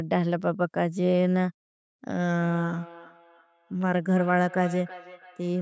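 From 2.35 s onward, feedback echo between two devices: another device's playback is recaptured, so speech returns roughly every 0.3 s, peaking about 18 dB down.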